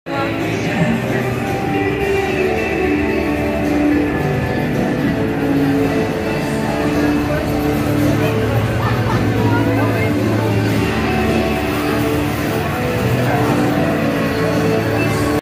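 No technical faults can be heard anywhere in this audio.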